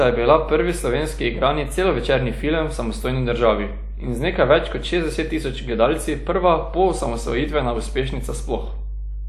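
A ground loop or nearby transformer leaks the power line into the signal, laying mains hum at 50 Hz, only about 10 dB below the speech, throughout.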